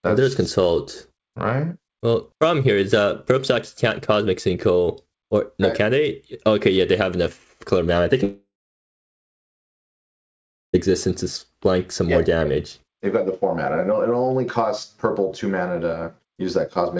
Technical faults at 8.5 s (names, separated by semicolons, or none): long network dropout